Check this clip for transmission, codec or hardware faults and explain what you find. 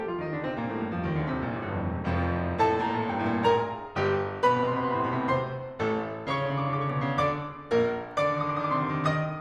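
Listening to the music, nothing stood out as a fault.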